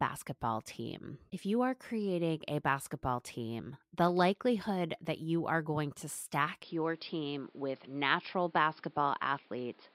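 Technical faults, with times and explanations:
6.63–9.95 s, input switched to a poorer device: the speech abruptly turns duller and boxier, with nothing above about 5.3 kHz and a new, faint background noise roughly 35 dB below the speech. There is no gap at the switch and the loudness barely changes. The likely cause is the recording moving to a lower-grade microphone or headset path. A simple filter or codec change would cut the treble without bringing its own noise and coloration.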